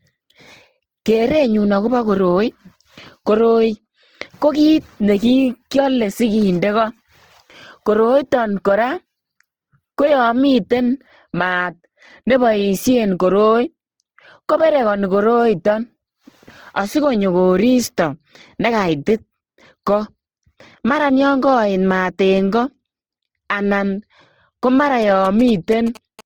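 The whole clip carries a grainy, rough texture on the speech. This is likely Opus compression in its music mode. The bands stay filled but turn noisy. The damage is plainly audible and points to a low bitrate near 16 kbps. The bandwidth stays wide, reaching about 20.2 kHz.

From 25.02 to 26.21 s, just after "ko mara", GSM signalling bursts appear. A nearby 2G phone is exchanging short radio bursts, and the audio circuit rectifies them. They come through as a galloping dit-dit-dit of short 217 Hz buzzes, well below the speech level.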